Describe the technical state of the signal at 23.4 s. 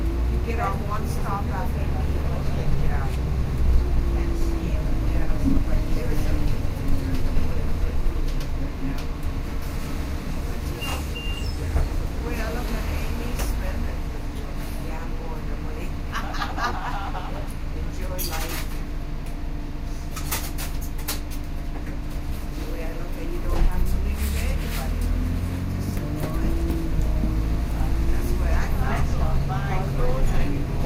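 At 23.4 s the signal is intact, with no dropout, clipping, glitch or other fault present at that point in the sound.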